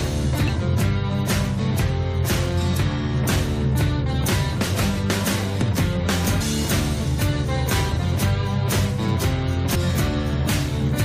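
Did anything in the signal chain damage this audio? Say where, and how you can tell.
Yes. The damage is in the compressed stream, at the codec stage. Three brief glitches break through: one at 0.48 s, one from 6.40 to 6.42 s, and one at 9.74 s. Each lasts only about 20 ms. These are damaged data in a compressed stream. Corrupt bytes made the decoder misread those frames and lose sync. It garbled or dropped the audio until it locked onto the next valid frame header.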